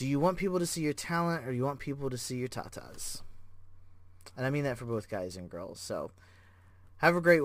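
Sample clock jitter runs through the whole recording. The converter's clock wanders by a few microseconds, so samples land slightly off time. A rough hiss follows the speech, strongest on loud and bright sounds, sitting roughly 25 dB below them and vanishing in pauses.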